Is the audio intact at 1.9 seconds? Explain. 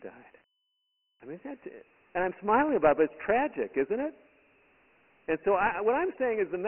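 No. Dialogic VOX ADPCM damage runs through the whole clip. Coarse 4-bit coding at 24 kbps leaves gritty hiss trailing the speech and nothing above 3 kHz.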